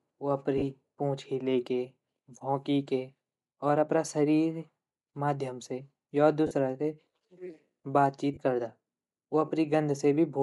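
A Bluetooth LE Audio link carrying this speech clip was likely running the LC3 codec at a modest rate, and the codec damage is plainly audible throughout. The grainy, breathy edge on the voice and the noise-like texture in the upper band sound like Bluetooth LC3 compression, with high-frequency detail discarded and replaced by synthetic noise. The roughness fits something near 48 kbps with 10 ms frames. Three brief dropouts point to lost LE Audio frames, where the decoder concealed each gap by repeating the previous spectrum with scrambled phase. The first runs from 0.58 to 0.63 s, about 40 ms, just before "पूँछ हिलेके". The second runs from 6.47 to 6.51 s, also about 40 ms, right after "माध्यम से य". The third, about 30 ms, runs from 8.34 to 8.37 s, just before "करदा उ". Each gap's length fits three or four missing 10 ms frames.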